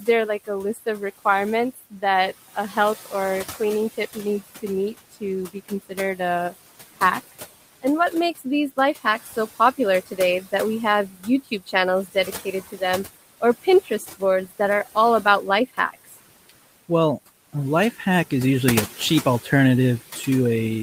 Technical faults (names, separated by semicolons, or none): noise suppressor artifacts; speech cut by the noise suppressor